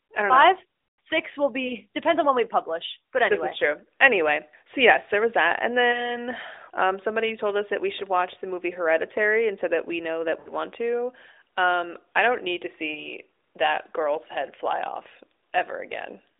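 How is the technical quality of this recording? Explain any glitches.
The recording is narrowband mobile speech with four short glitches caused by lost AMR speech frames. The band is limited to roughly 300 Hz to 3.7 kHz and carries only light codec colouring, which fits AMR-NB at around 12.2 kbps.

Lost AMR speech frames occur at 1.68–1.75 s, 5.92–6.23 s, 10.40–10.53 s and 12.92–13.11 s. When a corrupted frame arrives, the decoder repeats the last pitch and vocal-tract settings at falling gain. Each single-frame event sounds like a brief warbly dip. The 10.40 s event is a longer smear, consistent with about three consecutive frames. A plain dropout would cut to silence, but these glitches hold the previous sound and fade it out.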